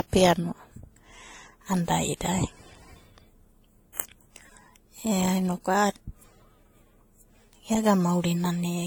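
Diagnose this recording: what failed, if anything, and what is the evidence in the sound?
The fault sits at the codec stage and runs for the whole speech recording: transcoding between lossy codecs, likely an AAC-LC encode at around 48 kbit/s later re-encoded to WMA at around 64 kbit/s. Nothing is present above about 19.4 kHz, and two different kinds of coding artefacts sit on top of each other. A single low-bitrate encode would show only one codec's artefacts. Here the second encoder has spent its bits reproducing the first encoder's artefacts and added its own, and the lowest bandwidth limit in the chain has stayed in place.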